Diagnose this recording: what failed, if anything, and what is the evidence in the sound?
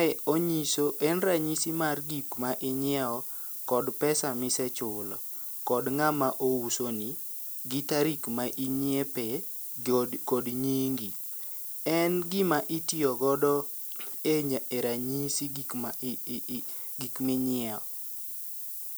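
A thin, treble-heavy hiss sits only about 10 dB below the speech throughout. The cause is low bit depth with noise shaping: 6-bit sample-format conversion pushes rounding error upward.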